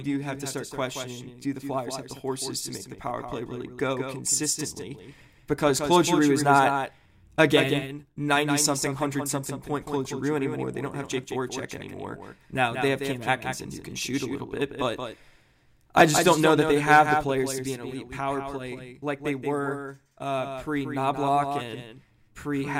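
From start to finish the speech carries a doubled audio track: a second, full-band copy trails the original by about a fifth of a second, roughly 5 dB quieter. Most likely the same signal was captured again through a slower path and mixed back in. Unlike room echo or reverb, the trailing copy neither decays nor takes on any room colour. It is an exact duplicate at one fixed lag, so each syllable is audibly restated.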